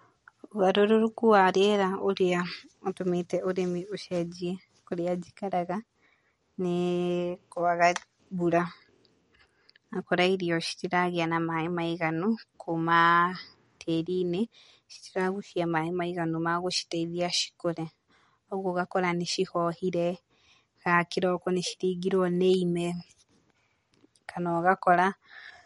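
Throughout the speech, there is a plainly audible watery swirl on s sounds, with smeared consonant onsets, likely MP3 compression at a low bitrate near 47 kbps. The warbling separates it from a simple low-pass filter.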